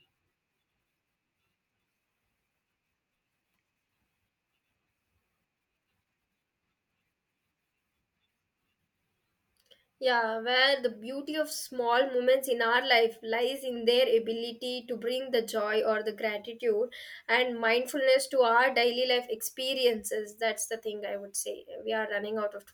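No technical faults are audible.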